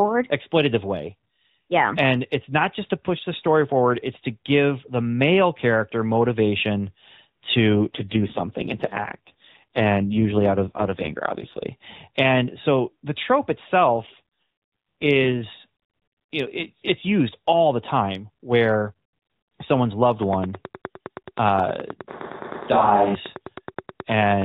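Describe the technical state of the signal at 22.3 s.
At 22.3 s there's a train of clicks running from 20.23 to 24.43 s, right after "someone's loved": regular ticks at about 9.5 per second, peaking roughly 10 dB above the signal, likely interference or a faulty connection. On top of that, from 22.08 to 23.15 s there's a switch to a distant microphone, likely because the close mic dropped out. The voice goes roomy and hollow with thinner bass at about the same level, and room noise sits around 30 dB below the speech. The light AMR narrowband band-limiting is audible through both.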